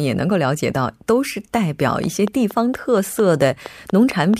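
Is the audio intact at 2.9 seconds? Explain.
No. From 2.04 to 4.35 s a train of clicks ticks over the speech at a steady 4.35 per second, about ten in all, peaking about 5 dB above the signal, likely from interference or a faulty connection. They appear as evenly spaced vertical broadband lines and sharp waveform spikes.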